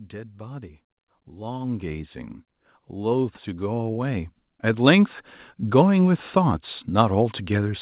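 From 0.1 to 2.19 s and 2.74 to 5.17 s, automatic gain rising lifts the level about 7 dB, then 9 dB. Background swells along with speech, unlike a talker moving closer.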